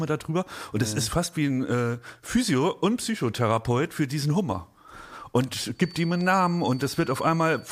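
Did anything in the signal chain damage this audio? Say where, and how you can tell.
Yes. The likely cause is an acoustic loop, a loudspeaker feeding back into the microphone ahead of the converter, held just short of runaway gain. The result is a feedback whistle from 5.72 s to the end of the speech at 7.71 s: a steady tone at 4.5 kHz sitting about 25 dB below the speech. It keeps ringing at one pitch, independent of what is said, and never builds into a full howl.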